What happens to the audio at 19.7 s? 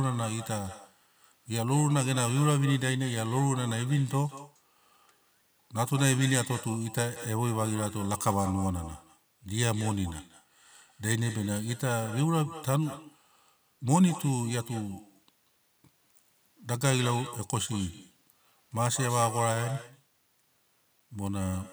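Echo with no canceller is present at 19.7 s, as it is throughout the clip. The far end's loudspeaker feeds its microphone unchecked, so the speech returns after about a fifth of a second as a thinner copy, about 16 dB quieter.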